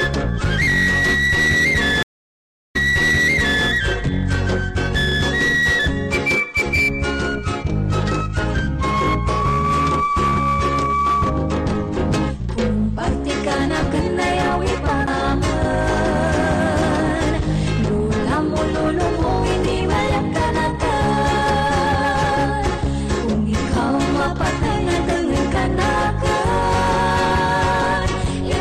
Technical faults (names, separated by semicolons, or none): stream reconnect; CD skip